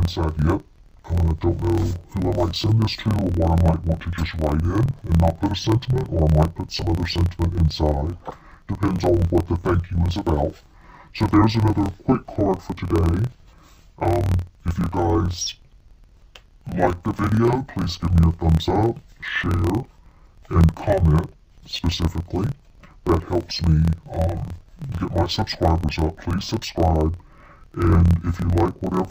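Throughout the clip the sound is doubled and choppy, sitting an octave low, with choppiness at about 38.3 Hz running under everything. This is interleaved audio read as planar. Each block of roughly 26.12 ms holds alternating left and right samples, but the first half is taken as left and the second as right. Each channel then plays its samples at half speed, which drops the pitch 12 semitones, while the block boundaries chop the sound at the block rate.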